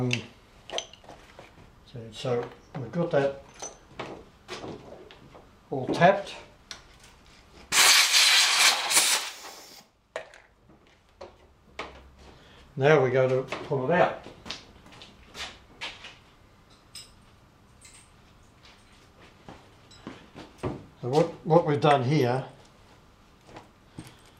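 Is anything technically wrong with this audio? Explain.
No, nothing technically wrong stands out anywhere in this audio.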